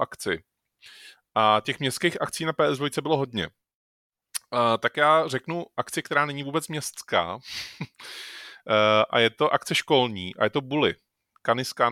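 Listening through this speech recording, nothing stood out as a technical fault at any point.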